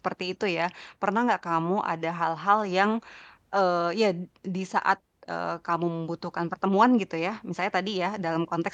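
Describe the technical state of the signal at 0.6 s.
At 0.6 s the speech signal is intact, with no audible fault at that point.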